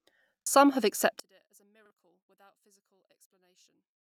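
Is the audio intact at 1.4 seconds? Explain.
No. From 1.2 s onward the speech drops about 37 dB to a faint trace, likely one channel inverted cancelling in the mono sum, leaving a nearly flat waveform.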